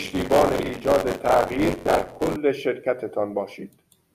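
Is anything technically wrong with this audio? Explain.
Yes, there's buffer tearing from 0.00 to about 2.37 s. The writer and reader have slipped, so roughly a fifth of every buffer is stale audio from around 40 ms back, hard-spliced in. That gives a robotic 93.8 Hz buzz over the speech, which fits a 512-sample buffer.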